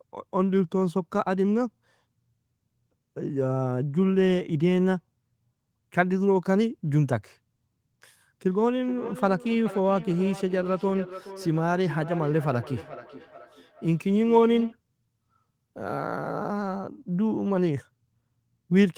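From 8.47 to 14.79 s there's a feedback echo between two devices: one speaker replays another's microphone, which hears it again, and neither echo canceller catches it. The speech comes back roughly every 0.4 s as a thin, ringing repeat, peaking about 15 dB below the speech.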